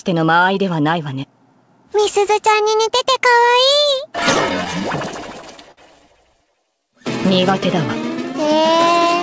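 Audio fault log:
4.20–5.79 s, repeated stalls (stutter): the sound catches eleven times, dragging forward in small hitches, each up to 56 ms, about 153 ms held in total, nothing lost. Packets were arriving late, the jitter buffer kept running dry, and the receiver stretched the last sound until data resumed, fading the longer holds. On a spectrogram, brief frozen, smeared stretches repeat below the 8 kHz ceiling of the call path; the waveform shows copied cycles and shallow dips.
6.50–6.81 s, jitter buffer slow-down: this short span plays at about 91% speed, adding roughly 37 ms, so the sound turns drawn out while keeping its pitch. The buffer was low or had just raised its target delay, so the receiver built a reserve by repeating single pitch periods several times in a row. On a spectrogram, harmonics stay at the same height but stretch sideways. The waveform shows near-identical periods repeated back to back.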